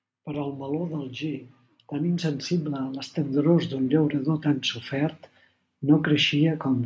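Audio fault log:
0.25–5.2 s: automatic gain rising. The gain control judged the input too quiet and raised its gain by about 10 dB over nearly five seconds, so speech and background noise swell together. The waveform envelope widens steadily and the spectrogram darkens evenly across that span.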